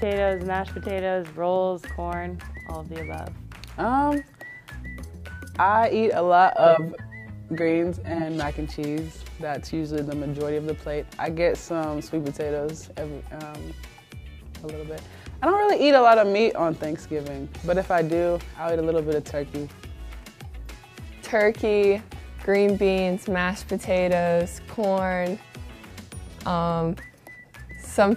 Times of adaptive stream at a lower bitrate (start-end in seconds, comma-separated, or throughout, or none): 6.55-8.55